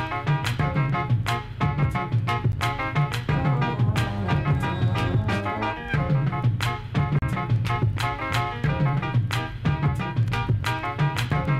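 Two blocks of digital silence break up this audio. The sound drops straight to silence at 2.52 s for about 11.6 ms, which fits a 512-sample buffer, and again from 7.19 to 7.22 s for roughly 35 ms. Neither has a fade, so the sound cuts out and back abruptly. The first comes across as a sharp tick and the longer one as a brief hole. It sounds like the program didn't fill its output buffer in time.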